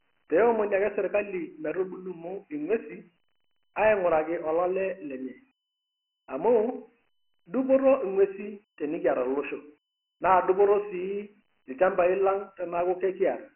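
From start to finish the speech is dull and boxed-in, with nothing above 3 kHz and a gritty hiss riding every syllable. That is heavy Dialogic VOX ADPCM damage: 4-bit coding at a rate that fits 6,000 samples a second, so precision and bandwidth are both starved.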